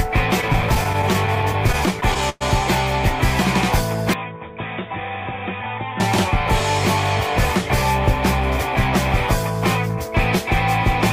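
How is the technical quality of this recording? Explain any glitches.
The quality is impaired by two glitches.

From 0.41 to 2.43 s there are repeated stalls (stutter). Packets arrived late, so the playback buffer kept running dry. Nineteen short stalls, the longest 110 ms, were bridged by stretching the last sound. They fill about 15% of that span. Nothing is lost, but the audio drags and hiccups.

From 4.14 to 6.0 s the sound turns dull and boxy. The band narrows. The level falls by about 10 dB, and a faint new noise floor appears. There is no gap at the change. The likely cause is an input switched to a poorer device.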